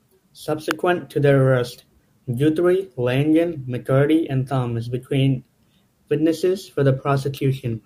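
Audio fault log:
0.71 s, electrical switching spike: a sharp snap lands on top of the speech. It is likely a brief arc from a nearby switch, motor or static discharge coupling into the audio line as a short burst.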